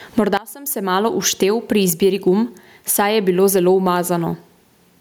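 From the start of the clip the level pumps. The gain swings by roughly 25 dB, so loud and quiet passages sit unnaturally close together and the speech sounds squashed. This gain pumping points to an input gain set far too high, with a fast limiter or compressor likely clamping it down on every peak and releasing it in the gaps.

At 0.37 s the mono level collapses by about 20 dB and stays down to the end of the clip. What remains is a faint residue. The centred speech largely disappears, which is the signature of one channel inverted. One stereo channel has likely had its polarity reversed, so when left and right are summed, the material common to both cancels and only their small difference survives.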